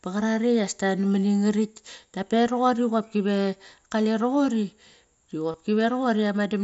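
At 5.52 to 5.54 s, concealed Bluetooth headset packet loss occurs: a short run of voice packets from the headset never arrived, and the receiver filled the roughly 22 ms gap, which fits about three lost frames, by repeating the best-matching stretch of recent speech. The repeat gives a brief buzzy, held tone at full level with a slight warble as the real speech returns, carried over the light graininess of the mSBC headset link.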